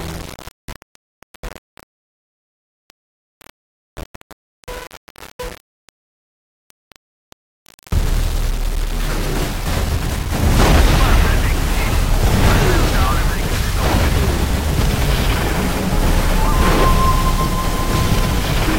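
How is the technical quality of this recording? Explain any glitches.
The recording has grainy distortion throughout. Low bit depth without dither is the likely cause. The signal appears to have been rounded to about 5 bits, leaving error roughly 20 dB below the signal that follows the audio and makes it sound gritty.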